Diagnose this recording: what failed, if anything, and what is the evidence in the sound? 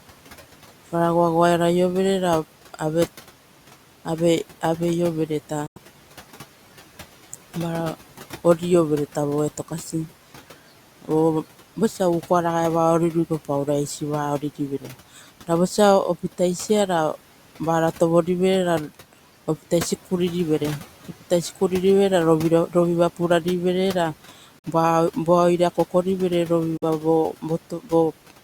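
Noise suppressor artifacts run through the whole speech recording, from the call-processing stage. The room noise, about 20 dB below the speech, is pushed down by about 11 dB between phrases and rises back under them, so the background breathes in time with the talker. A steady noise floor would not pump this way. It is a gain mask that changes frame by frame with what the suppressor judges to be noise.

Three short silences fall at 5.66–5.78 s, 24.59–24.65 s and 26.77–26.84 s, removing roughly 93 ms, 46 ms and 46 ms of audio. The speech resumes as if it had kept running underneath, which points to a Bluetooth dropout at the playback link, likely caused by packets arriving too late for the headphones. The lengths fit four, two and two lost packets. The suppressor only attenuates. These gaps go fully silent.

Speech cut by the noise suppressor appears at 14.80–14.95 s, where the level sinks by about 12 dB, and at 27.70–27.92 s, about 10 dB down. 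Each lasts on the order of a tenth of a second. Here the suppressor misreads soft speech energy as noise and turns it down with the background, so the sound goes faint and swallowed rather than vanishing. Unlike the dropouts, some of the signal remains audible through each dip.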